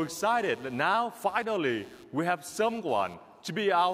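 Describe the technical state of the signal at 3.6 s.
At 3.6 s, computer activity noise is present, as it is throughout the clip. A buzz pulsing at around 150 Hz sits roughly 30 dB below the sound. It comes from processor or graphics load shifting the audio circuit's shared ground, so it follows the computer, not the audio.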